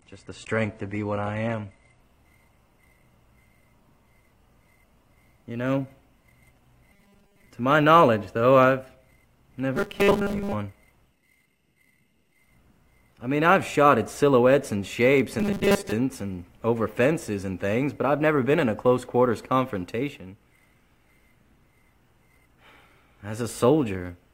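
For the first 2.0 s the sound comes from an adaptive stream starting at a low bitrate. Nothing is present above 10 kHz, and codec smearing is heavier. At 2.0 s the quality jumps up with no gap or hiccup, which fits a switch from roughly 32 kbit/s AAC to 96 kbit/s. That sudden clean step separates it from a stream that is simply encoded poorly throughout.

From 6.93 to 7.47 s, 9.76 to 10.53 s, and 15.40 to 15.92 s, the sound turns into a rigid, metallic 200 Hz buzz. It still loosely follows the shape of the material underneath. This is robotic sound from repeated short buffers, likely caused by audio arriving too slowly. The player keeps looping the last few milliseconds, and the 200 Hz pitch fits a 5 ms repeat, while most of the real audio is skipped. Unlike ordinary dropouts, there is no silence, only that fixed-pitch drone.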